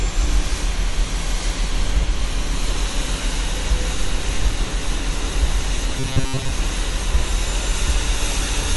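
Throughout the clip plainly audible swirly, watery smearing sits on the sound, with transients losing their edges. That fits MP3 compression at a low rate around 48 kbps, the encoder discarding treble and weak components to save bits.

From 5.99 to 6.52 s the sound turns into a rigid metallic buzz at 133 Hz, likely robotic sound from repeated short buffers. A segment of about 7.5 ms is looped to cover late audio, so most of that stretch is repeats rather than fresh sound.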